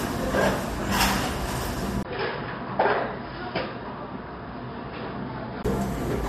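From 2.03 to 5.65 s the everyday sound loses everything above 5.2 kHz and drops slightly after a 20 ms gap, with faint new hiss. Unlike a plain filter, this points to a likely input switched to a poorer device.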